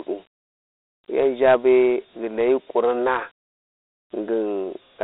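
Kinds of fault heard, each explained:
Dialogic VOX ADPCM: 4-bit adaptive coding, fitting 32 kbps, leaves gritty hiss tracking the speech; spectrogram shows a 300 Hz to 3.7 kHz band, empty above 3.9 kHz.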